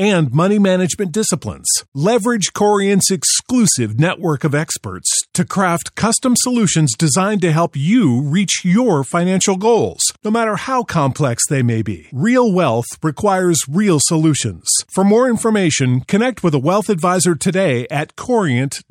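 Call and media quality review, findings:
No faults found in this recording.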